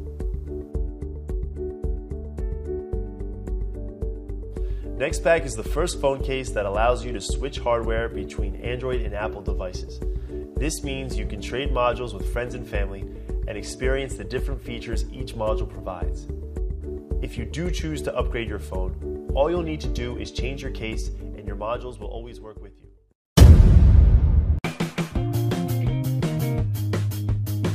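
No faults detected anywhere in the recording.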